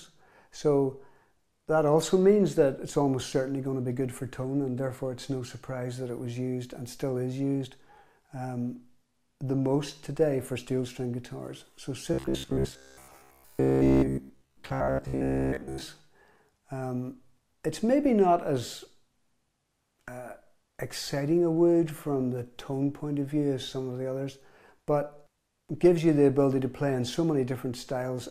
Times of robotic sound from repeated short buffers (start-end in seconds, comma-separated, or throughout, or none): 12.14-15.81